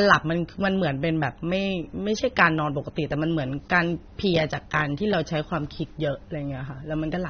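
From start to finish the speech is band-limited, with nothing above 6.3 kHz, and sounds dull and smeared with plainly audible codec damage. This is likely AAC compression: AAC-LC quantising coarsely at a bitrate that fits 24 kbps, discarding the upper band and thinning what remains.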